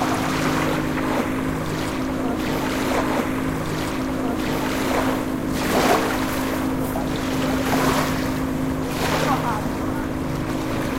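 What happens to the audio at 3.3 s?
At 3.3 s the audio is inside a stream segment repeat running from 2.98 s to 4.97 s. The player has fetched or queued the same chunk of the stream twice, so close to 2.0 s of sound is heard again after a small blip where playback jumps back. What sets it apart from a buffer stutter is the length: a stutter loops a few milliseconds in a rapid buzz, while this replays a long, recognisable stretch once.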